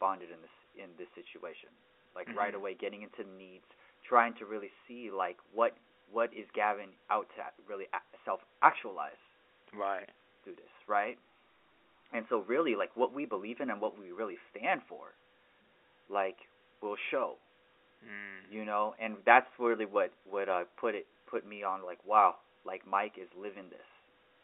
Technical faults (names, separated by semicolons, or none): none